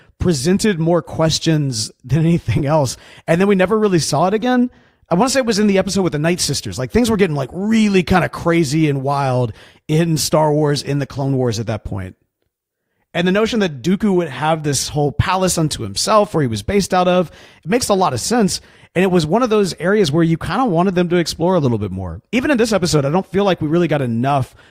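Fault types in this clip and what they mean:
Corrupt frame decoded: at 2.58–2.62 s and 11.16–11.18 s, damaged compressed frames were played anyway, and misread gains and codes threw energy into the wrong frequencies. Each is a brief chirpy burst over the speech, the first loud across a few frames, the second quieter and shorter.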